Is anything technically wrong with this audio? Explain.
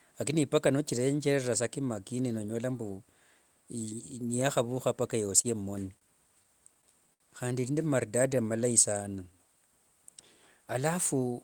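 Yes. The speech has three kinds of jitter buffer fault, all between about 5.4 and 9.3 s.

A short stall from a late packet occurs twice, at 5.41–5.47 s and 5.99–6.04 s. Each time a packet missed its playout moment, the buffer ran dry, and the receiver stretched the last sound, by 23 ms and then 26 ms, until the packet arrived. Nothing is lost; a sound is simply held too long. Each is a single isolated hold, which separates it from the stutter that follows.

Repeated stalls (stutter) run from 6.43 to 7.23 s. Packets kept arriving late, so the buffer emptied five times in under a second. The receiver continued the last sound through each wait, filling 108 ms in total, about 14% of that span, with the longest gap 66 ms. Nothing is missing, but the speech drags and catches repeatedly. It is the clustering of several holds in one short stretch, not any one hold, that marks this as stutter rather than separate late packets.

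A jitter buffer slow-down spans 8.30–9.33 s. To rebuild its reserve, the receiver repeated single pitch periods or pause fragments many times over, adding 73 ms, so playback runs at about 94% speed with the pitch unchanged. Unlike a stall, there is no single held sound. Instead the whole stretch is drawn out, with lengthened sounds spread across it.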